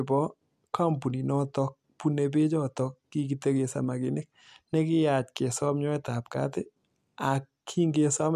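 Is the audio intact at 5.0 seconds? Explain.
Yes, the speech at 5.0 seconds is intact, with no dropout, click, distortion or other fault at that moment.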